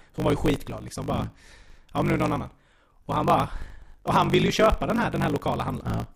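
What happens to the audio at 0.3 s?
At 0.3 s the speech carries a block size mismatch (truncated), present throughout the clip. The tail of each block is discarded, which fits 1024-sample writes read in shorter chunks. The result is a 50 Hz buzz and speech running 1.16 times fast at roughly normal pitch. On a waveform, jumps recur every 20 ms. A spectrogram shows vertical striations at that spacing and harmonic lines at multiples of 50 Hz.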